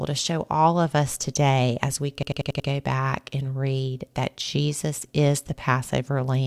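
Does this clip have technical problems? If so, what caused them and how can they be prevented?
Yes. There is a system hang loop from 2.23 to 2.69 s. The computer stalled while the sound hardware kept replaying its ring buffer, so one 92.9 ms slice repeats five times as a machine-gun stutter at 10.8 Hz. That slice length fits a 4096-sample buffer. Running audio on a high-priority thread, with a watchdog that mutes output when the buffer stops refilling, prevents this.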